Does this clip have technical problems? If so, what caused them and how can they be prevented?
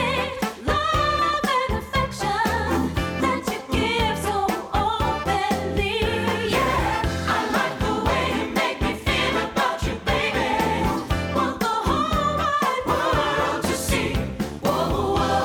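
No, there are no technical faults to report in this audio, so nothing needs preventing.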